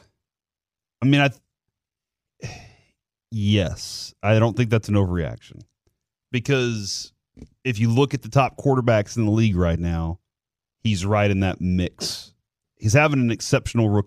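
No technical faults are audible anywhere in the speech.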